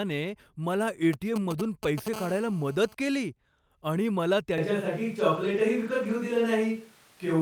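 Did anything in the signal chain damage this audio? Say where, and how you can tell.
Yes. Between 1.13 and 2.08 s there are GSM signalling bursts, picked up in the analogue wiring. A nearby 2G phone was exchanging signalling traffic, and its radio pulses, repeating at about 217 Hz, were rectified by an audio input stage. The result is a galloping pattern of ticks and short 217 Hz buzzes, sitting somewhere around 10 dB below the speech. The groups come and go because the handset transmits only in brief clusters while signalling.

From 2.14 to 2.95 s the pattern turns into continuous GSM phone buzz, again interference coupled into the analogue side. The phone has moved into an active call and now transmits bursts steadily at about 217 Hz. Rectification turns that into a hard, raspy buzz rich in harmonics, about 16 dB below the speech and unrelated to it. The shift from intermittent ticks to unbroken buzz marks the change from signalling to call traffic.

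At 4.58 s, right after "आणि मला", the sound becomes roomy and hollow and stays that way to the end. This is a switch to a distant microphone, likely because the close microphone's feed dropped out at the capture stage. The overall level barely changes, but bass thins out and room noise rises to about 30 dB below the speech. The change is abrupt, with no fade, which points to a source switch rather than someone moving.

Between 5.19 and 6.11 s, ten short stretches of 20 ms each sound rough and noisy without breaking into gaps. This is the network and codec stage: each lost packet was rebuilt from error correction, using the low-bitrate copy carried in the following Opus packet. The decoder played those coarser copies in place of the missing frames, so continuity holds but each patched frame carries a brief grainy texture.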